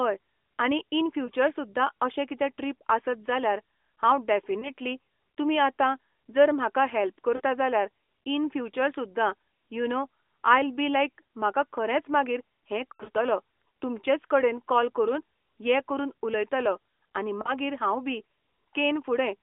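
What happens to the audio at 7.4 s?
Between 7.36 and 7.41 s, after "जर म्हाका हेल्प", lost AMR speech frames (about 40 ms, fitting two frames) make the decoder repeat the last pitch with fading gain. The result is a brief drawn-out, fading sound, not a hard silent gap.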